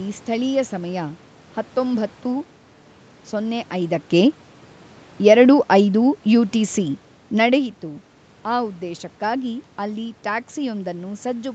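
From 4.12 s to 7.78 s the level steps down as automatic gain falling: the gain control judged the input too hot or its background noise too strong and eased its gain down by about 4 dB over those few seconds. What separates this from the talker moving away, which also happens around 3.5 s and 7.5 s, is that the room noise sinks right along with the speech. A change in distance would leave the background steady while only the speech faded.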